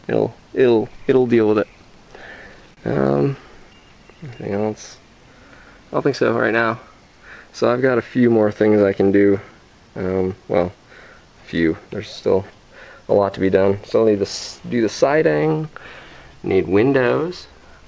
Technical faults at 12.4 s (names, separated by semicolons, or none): clock drift between sender and receiver; repeated timing corrections